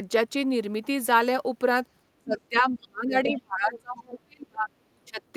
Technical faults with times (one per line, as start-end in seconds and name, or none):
2.18-4.70 speech suppressed in double talk
3.75-3.80 other side's voice leaking through
5.05-5.22 speech suppressed in double talk